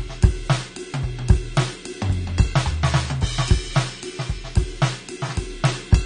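From start to finish the music sounds dull and smeared, with a warbling, fizzy texture on sustained tones and nothing above about 9.7 kHz. This is likely AAC compression at a low bitrate, around 32 kbps, which trims the top band and coarsely quantises the rest.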